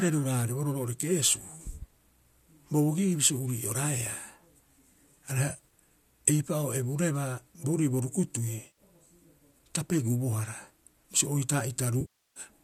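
Brief smeared, phasey patches break into the speech at 5.50 to 5.72 s, where about 100 ms of gaps are scattered in short runs of a few tens of milliseconds, and at 8.67 to 8.79 s, covering another 100 ms. From 12.01 to 12.40 s a 350 ms loss decays toward silence and fades back. This is AAC frame loss with concealment, likely within a low-delay AAC stream. The decoder rebuilds each gap from the last good spectrum, and over the longest gap it lets that spectrum fade.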